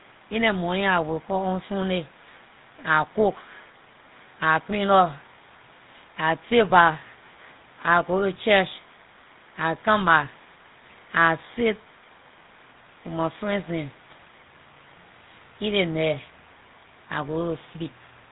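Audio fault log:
Throughout: GSM full-rate codec. The speech has a plainly audible buzzy, gravelly roughness. The codec rebuilds each stretch from a vocal-tract model driven by a sparse train of regular pulses, so the fine detail of the original excitation is lost. That coarse excitation gives the grainy texture. Nothing comes through above about 3.8 kHz, which leaves the sound dull and boxy. The damage fits the 13 kbps GSM full-rate standard.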